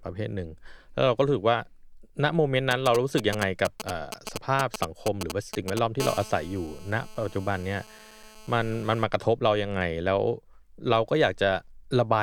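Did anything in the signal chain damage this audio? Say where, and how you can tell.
Yes. GSM signalling bursts get into the analogue wiring from 2.71 to 5.79 s as a galloping dit-dit pattern of brief 217 Hz buzzes, only a few decibels below the speech. A nearby phone's short radio bursts are rectified in the circuit. A spectrogram shows clustered vertical bars with harmonic stacks.

GSM phone buzz follows in the same analogue path from 6.00 to 9.04 s: a steady, raspy 217 Hz buzz about 18 dB below the speech, from a phone in a call transmitting in bursts 217 times a second. The spectrogram shows evenly spaced harmonic lines, and the waveform shows a regular 4.6 ms pulse train.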